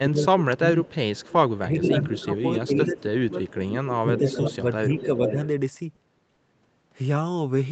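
Speech in which the talker's level sinks from 0.0 to 0.97 s, 1.58 to 3.38 s and 3.96 to 5.36 s, with the deepest dips about 20, 15 and 10 dB. This is speech suppressed in double talk: the echo canceller, likely unable to tell the near talker from the loudspeaker echo while both sides spoke, turned everything down. A delayed copy of the voice also comes back at 1.15 to 1.58 s (391 ms late, about 25 dB down) and at 1.89 to 2.4 s, 2.93 to 3.02 s, 3.42 to 4.41 s and 4.93 to 5.47 s (440 ms late, about 5 to 15 dB down). This echo leak likely comes from a loudspeaker on one side whose canceller let part of its microphone pickup through. Finally, sounds hang on briefly at 5.95 to 5.99 s and 6.35 to 6.40 s, held for 20 and 30 ms with nothing lost. These are short stalls from a late packet, where the jitter buffer ran dry and stretched the last sound until the packet arrived.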